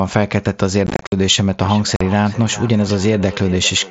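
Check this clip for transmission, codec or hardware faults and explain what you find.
Two faults are present: unconcealed Bluetooth headset packet loss and feedback echo between two devices. The mSBC headset link can also be heard, with its 8 kHz ceiling and light grain.

Unconcealed Bluetooth headset packet loss occurs from 0.87 to 1.12 s and again from 1.96 to 2.01 s. Short voice packets between headset and phone went missing. Silence or an idle pattern filled them. The first burst loses 165 ms scattered over 255 ms, with the longest gap 52.5 ms. It sounds chopped and crackly. The second loses 45 ms.

Feedback echo between two devices runs from 1.6 s to the end. A second device in the room plays the call back into the first microphone. That microphone's canceller cannot remove it. The speech returns about every 0.4 s, thin and ringing, at up to about 16 dB below the speech.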